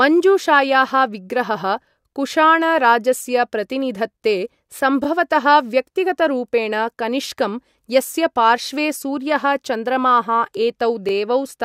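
Overlapping chunks break the speech at 2.02–2.04, 5.04–5.07, 8.07–8.09 and 11.09–11.11 s. Each new 3-second chunk restarts 23 ms early, so that sliver plays twice, giving a brief stutter. Unlike a dropout, nothing goes missing; audio repeats, at a steady 3-second rhythm.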